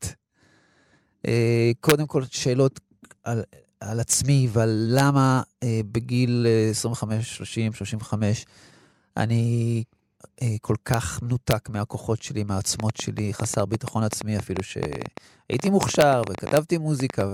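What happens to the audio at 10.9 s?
A single violent crack cuts through the speech at 10.94 s, far sharper than ordinary clipping. This is integer overflow: a peak went past the largest value the integer format can hold and, instead of being limited, wrapped around to the opposite sign, snapping across the full range in one step.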